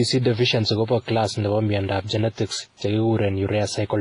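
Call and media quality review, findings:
Whole clip, speech: ringing, washy texture, with hiss that swells and fades with the signal; nothing above 10.5 kHz. Heavy damage, likely WMA compression at a low bitrate, fitting about 24 kbps.

Long transform blocks smear quantisation noise over tens of milliseconds, and weak spectral lines are zeroed. Unlike a plain low-pass filter, the noise is signal-dependent and pre-echoes around onsets rather than simply dulling the top end.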